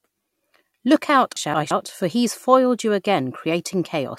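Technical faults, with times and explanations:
1.37–1.71 s, chunks out of order: two 171 ms speech chunks play swapped, sounding jumbled, with waveform breaks at three joins.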